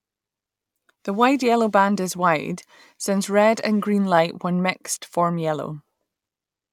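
No technical faults can be heard anywhere in this recording, which carries its speech as a steady, intact signal from its first moment to its last.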